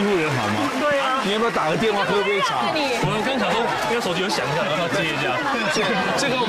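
Nothing is technically wrong with the audio, so there are no times or causes to give.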